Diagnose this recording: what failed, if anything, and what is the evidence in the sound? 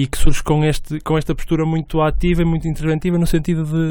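Nothing failed in this recording, and the sound gives no evidence of any fault.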